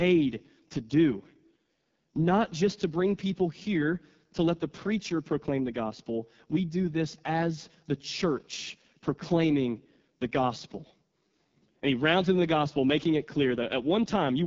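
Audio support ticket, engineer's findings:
Rough, raspy speech throughout, with nothing above 7.5 kHz. AMR wideband (HD Voice) codec: a pulse-excited vocal tract model codes the band below 6.4 kHz, and synthetic noise fills the top. The heavy damage fits the lowest 6.6 kbit/s mode.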